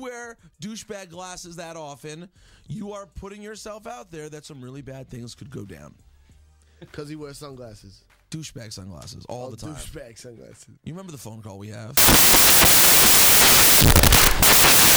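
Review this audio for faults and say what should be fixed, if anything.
From 11.97 s to the end of the clip, the audio turns into loud, harsh broadband noise: samples built from the wrong bytes. The reader has paired or ordered each sample's bytes incorrectly, so the rapidly changing low-order bits land in the most significant position and dominate every value. Fix the byte order and alignment in the reader, checking the declared endianness and sample width against the stream before decoding.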